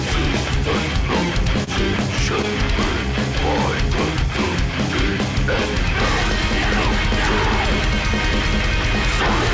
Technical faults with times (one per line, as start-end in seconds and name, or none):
1.64-1.70 short stall from a late packet